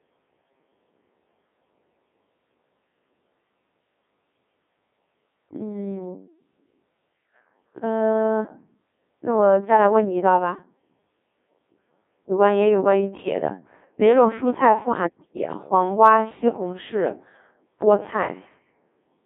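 From start to finish the speech passes through a Codec 2 vocoder, which fits a rate near 1.6 kbit/s. Instead of keeping the waveform, the decoder rebuilds each voice from sine waves using only pitch, voicing, energy and a spectral envelope. The result is a heavily robotic, buzzy voice confined to roughly 200 Hz to 3.6 kHz, with nothing above 3.8 kHz. Unlike plain band-limiting or a smeary low-bitrate transform codec, the voice's own texture is replaced by synthetic tone.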